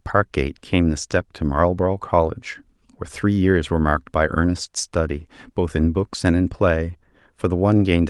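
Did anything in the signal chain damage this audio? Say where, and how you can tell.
No, nothing along the chain audibly damaged this speech recording, and no stage shows a fault.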